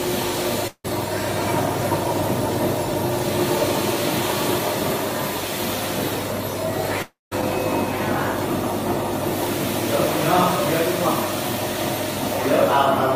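From 0.04 s to 2.65 s a train of clicks runs over the sound: roughly thirty near-identical ticks at a steady 11.2 per second, peaking about 5 dB above the signal. The clicks are likely interference from nearby equipment or a faulty connection or power supply. Their even spacing and matching shape set them apart from random crackle, and they carry on through the quieter moments as well.

At 0.67 s, while the clicks are still going, the first long network dropout begins and lasts until 0.86 s. The receiver fills about 0.17 s by stretching the last sound into a fading buzz or hiss, and the final 0.06 s is silent. About 0.16 s of audio is lost, likely to network loss.

A second dropout runs from 7.02 s to 7.33 s. Here the fill lasts about 0.29 s, including 0.18 s of silence, and about 0.3 s of audio is gone. These dropouts differ from brief glitches because the fill fades into silence and the audio resumes further on, without the missing part.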